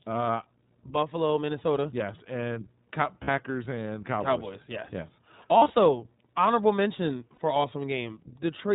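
Throughout, the speech sounds slightly rough and synthetic, with nothing above 4 kHz: the iLBC codec at work, which fits its 15.2 kbps, 20 ms-frame mode. At 3.24 to 3.29 s, at 5.58 to 5.75 s, and at 7.34 to 7.38 s, the sound turns into a brief held, buzzy vowel. These are lost iLBC frames: the decoder repeats the last pitch cycle mixed with noise, and each gap recovers almost immediately. The first and last gaps fit about 40 ms of loss. The middle one is scattered across 160 ms, with runs of around 40 ms at most.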